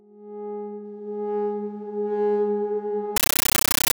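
At 3.16 s the sound is abruptly replaced by very loud, chattering static that runs to the end at 3.93 s. This is a compressed stream played as audio: an encoded bitstream, consistent with 640 kbps AC-3, reached the output undecoded and was treated as ordinary samples. Each coded frame comes out as a 13.3 ms burst of noise followed by zero padding, repeating at 31.25 Hz, which produces the rapid, rattling texture.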